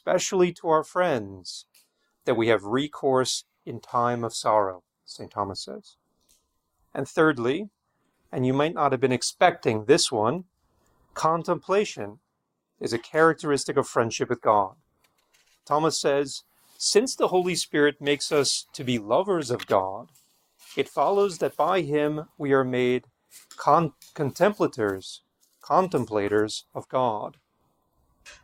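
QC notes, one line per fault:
Nothing stood out on listening.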